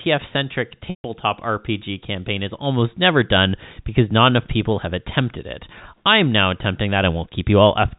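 At 0.90 s the stream drops about 140 ms of audio, ending at 1.04 s, which fits a run of seven 20 ms packets. The receiver covers the hole with packet loss concealment by pitch repetition, recycling the last pitch period of the speech and fading it out. The voice briefly freezes into a buzzy, held tone that dies away into silence, then cross-fades back in. Under the G.711 telephone coding, nothing above 4 kHz is present.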